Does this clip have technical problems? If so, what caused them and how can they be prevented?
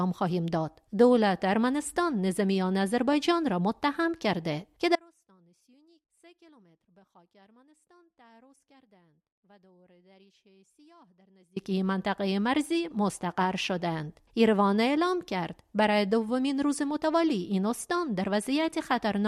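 Yes. From 4.96 s to 11.56 s the sound drops abruptly to a faint residue, leaving only a thin leak roughly 30 dB below its normal level for about 6.6 seconds before snapping back mid-flow. This is an audio dropout to a faint residue: the wanted signal was likely lost upstream, through a failing cable, connector or wireless link, while the rest of the chain stayed live and passed what little still got through. Securing connections and monitoring levels during recording would prevent it.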